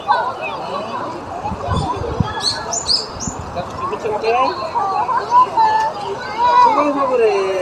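At about 3.1 s the sound skips ahead. Roughly 0.4 s of audio never reaches playback. It was either lost in transit or discarded because the jitter buffer overflowed while later audio was already queued. Nothing fills the hole, so the material on either side is butted together almost directly. The result is an abrupt forward jump with no audible gap, and the end-to-end delay drops by around the same amount.

A jitter buffer speed-up follows from 3.2 s to 4.54 s and recurs from 5.09 s to 6.45 s. Each time the buffer held more audio than its target. The receiver trimmed it by repeatedly cutting short segments one or a few pitch periods long, removing on the order of 100 ms per stretch. Playback runs at 107% speed while pitch stays unchanged, so those passages sound slightly rushed and their timing is compressed.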